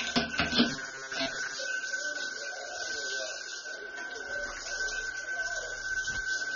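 Throughout the clip, likely AAC compression at a low bitrate, around 24 kbps, has stripped everything above 6.9 kHz and quantised the rest coarsely, so the sound comes across dull and smeared, with plainly audible codec damage: warbling, fizzy texture on sustained parts.

From 0.70 to 1.58 s, new audio arrives too seldom and roughly half of it is replaced by repeats of the last short stretch, producing robotic sound from repeated short buffers. The loop imposes a rigid metallic buzz at 134 Hz, which fits a buffer of about 7.5 ms.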